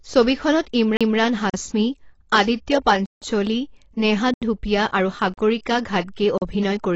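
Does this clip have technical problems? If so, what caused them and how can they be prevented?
Yes. The speech sounds dull and smeared throughout, with a fizzy, warbling edge on sibilants and nothing above 7.8 kHz. The likely cause is AAC compression at a low bitrate, around 28 kbps, so the encoder discards highs and quantises coarsely. Encode at a higher bitrate.

At 0.97 to 1.01 s there is a CD skip. The disc player briefly mutes, with a tick. Then playback resumes from a different point in the spiral, so the sound jumps. Clean the disc, isolate the player from knocks, and rip with error checking.

Blocks of digital silence cut in abruptly at 1.50 s (40 ms), 3.06 s (160 ms), 4.34 s (80 ms), 5.34 s (40 ms) and 6.38 s (40 ms). This is most likely output buffers not being filled in time. Use larger buffers and reduce processing load during playback or recording.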